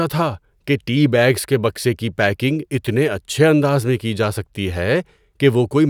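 No technical faults are audible anywhere in the recording.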